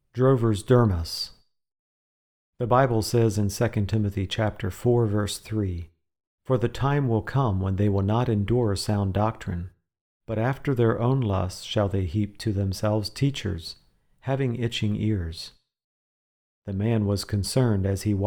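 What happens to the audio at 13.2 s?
Nothing goes wrong at 13.2 s; the audio runs through that moment intact, with no dropout, click, distortion or other fault.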